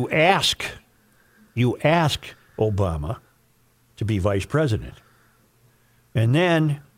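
Nothing in the speech stood out as a technical problem on listening.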